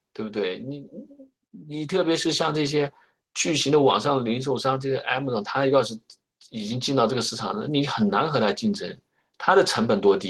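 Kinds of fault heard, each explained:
Automatic gain rising: From 1.51 s to 2.82 s the voice and the background noise behind it swell together, climbing by about 7 dB over roughly 1.3 seconds rather than jumping. This happens because the automatic gain control judged the incoming signal too quiet and raised its gain step by step. Since that gain multiplies everything in the signal, the room noise rises along with the speech instead of the voice alone getting louder.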